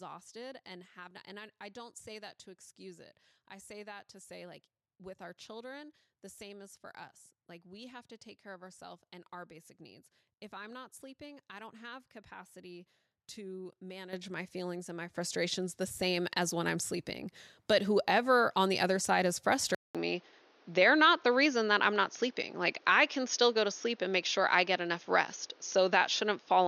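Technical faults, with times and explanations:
14.13 s and 15.15 s: microphone volume stepped up. Input gain jumps about 10 dB, then about 8 dB, lifting speech and background together. The waveform envelope steps up sharply each time.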